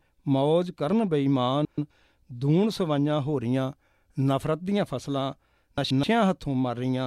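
A garbled flutter breaks into the speech at 1.65–1.91 s and 5.78–6.04 s. Both are frames out of order: two neighbouring 128 ms blocks, consistent with runs of four frames, were decoded swapped, so the halves play exchanged with no time lost.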